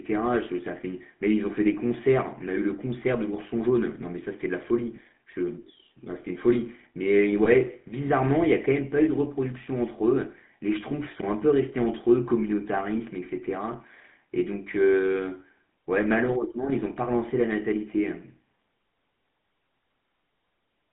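A buzzy, gravelly roughness sits on the speech throughout, confined to about 200 Hz to 3.5 kHz. This is the GSM full-rate codec, consistent with 13 kbps, rebuilding the voice from sparse pulses. From 4.96 to 4.99 s and again from 7.44 to 7.48 s, the sound briefly holds with a rough metallic ring. These are lost GSM frames, each fitting a single missing 20 ms frame that was filled by repeating the previous one.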